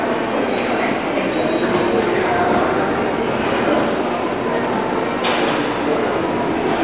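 No technical faults can be heard anywhere in this recording of sounds. Nothing in it calls for a time stamp or an explanation.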